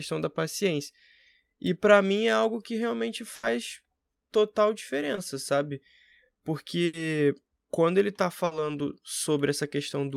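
At 3.35 to 3.45 s a burst of packet loss removes about 80 ms of speech. The receiver extends the last sound and fades it, leaving a held buzz or dimming hiss, then jumps ahead. At 5.15 s a short concealed packet loss of about 20 ms is patched by continuing the preceding sound and blending back, heard as a brief smear or wobble where a consonant may drop out. The same burst behaviour returns at 6.85 to 6.95 s (80 ms) and at 8.45 to 8.53 s (60 ms).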